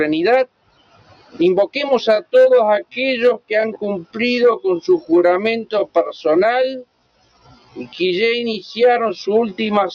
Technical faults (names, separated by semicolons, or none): noise suppressor applied to music or sounds; sound cut by the noise suppressor; time-stretched section